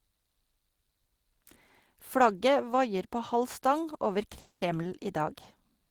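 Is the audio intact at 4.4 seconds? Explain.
No. A call audio freeze runs from 4.39 to 4.64 s. It fills about 220 ms with fading continuation of the last sound, likely from delayed packets. Nothing is lost afterward.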